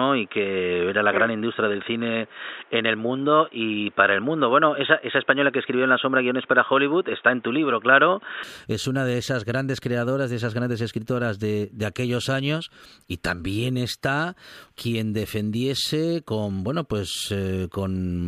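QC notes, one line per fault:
0.00–8.43 s, input switched to a poorer device: the recording was likely captured through a narrower-band input, such as a headset call profile, until it moved to the better device at 8.43 s with no gap. Before the switch nothing reaches above 3.8 kHz, so the speech sounds dull and boxy, with that device's own background noise about 35 dB down. At the change the sound opens up at once, and the level shifts by about 5 dB.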